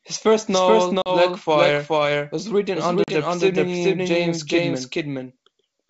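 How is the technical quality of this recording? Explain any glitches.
The recording has two problems: the speech is doubled throughout, and there are two brief dropouts.

Doubled audio track, throughout: a second full-band copy of the speech runs roughly 0.4 s behind the first at about the same level. It has no reverberant tail or room colour, so it sounds like a flat, mechanical echo rather than a real space. This is likely a second capture of the same signal through a slower path, mixed back in out of step.

Packet loss on an ADPCM call, at 1.02–1.09 s just after "first novel", and at 3.04–3.11 s just after "was written under": each time, 40 ms of audio drops to hard-edged silence, which fits a couple of lost packets. The decoder's adaptive predictor and step size then no longer match the sender's, so the speech resumes slightly distorted before settling within a few tens of milliseconds. 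The wideband telephone coding underneath, consistent with G.722 at 64 kbit/s, keeps the speech clear up to about 7 kHz.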